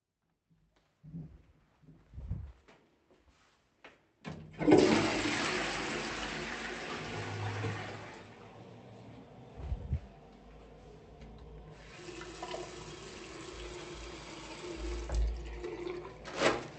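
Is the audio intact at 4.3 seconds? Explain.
Yes, the audio is intact at 4.3 seconds, with no dropout, click or other fault at that moment beyond the ordinary coding character of the call path it passed through.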